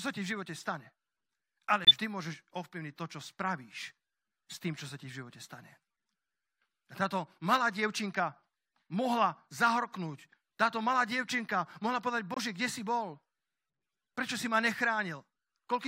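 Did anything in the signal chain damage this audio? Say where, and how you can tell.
Yes, codec stage: corrupt frame muted at 1.85 to 1.90 s and 12.34 to 12.38 s, before "kde si bol". The abrupt silences fit two rejected frames each, with timing kept.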